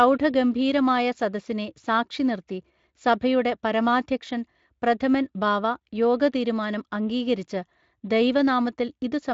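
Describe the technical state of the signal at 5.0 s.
At 5.0 s the speech is intact, with no fault at that moment beyond the light coding of the Speex codec it passes through.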